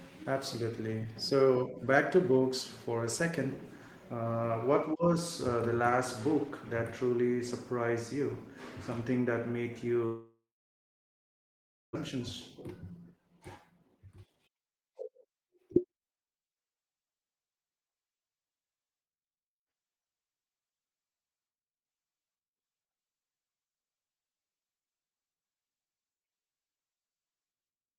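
Right after "that made" at 10.05 s, a likely long network dropout: a fading buzz, then about 1.5 s of silence, back at 11.97 s minus about a second of speech. From 12.05 to 16.39 s a jitter buffer speed-up snips tiny pitch-period slices, so speech runs at 120% speed, same pitch, sounding hurried.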